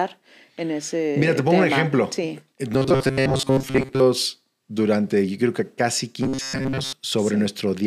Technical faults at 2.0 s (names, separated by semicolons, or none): none